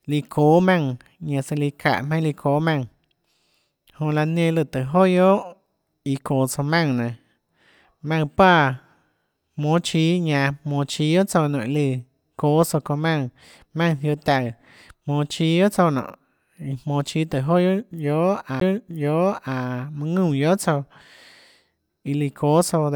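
At 18.60 s there's a CD skip: the laser jumped to another turn of the disc spiral, so playback mutes for a split second, around 15 ms, then picks up the speech from a different spot on the disc.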